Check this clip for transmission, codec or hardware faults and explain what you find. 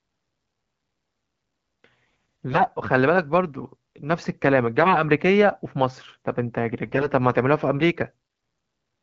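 The clip has one kind of fault: AMR bit errors, in three short bursts. They run from 2.50 to 2.72 s, 4.80 to 5.01 s, and 6.84 to 7.07 s. In the first two bursts, roughly a tenth of the less protected bits in the AMR-WB frames arrive flipped, and in the third about 7 percent. The frame checks still pass, so the decoder plays the damaged frames. Its excitation pulses land wrongly, and fine pitch, gain and spectral values drift. The speech holds its pitch and level but turns hoarse and gargly. This happens within codec output that is clear at 12.65 kbit/s.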